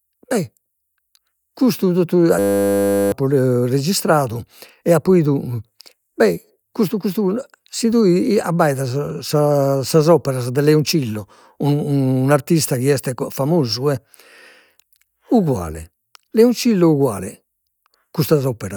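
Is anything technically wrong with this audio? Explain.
Yes. From 2.39 to 3.12 s, right after "custu totu", there is a system hang loop. The playback system froze while the audio hardware kept replaying one 10 ms slice of its buffer, producing a rigid 100 Hz buzz and losing about 0.7 s of speech. Unlike mains hum, it replaces the speech entirely and stops abruptly when the system recovers.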